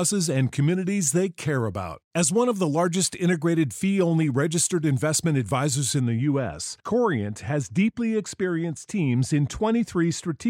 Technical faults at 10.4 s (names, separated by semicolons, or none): de-emphasis applied wrongly